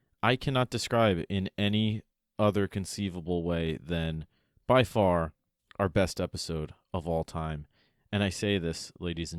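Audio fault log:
No faults heard.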